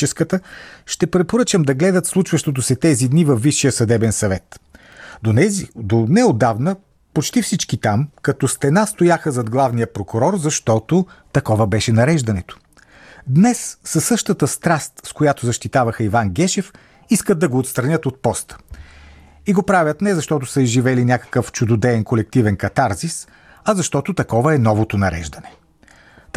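From 0.12 s to 25.77 s, a click recurs every 0.80 s, around thirty in all. Such strict regularity marks clock drift buffer slips, likely from two clocks roughly 200 ppm apart, each slip dropping or repeating a few samples. Packet-loss glitches would fall irregularly.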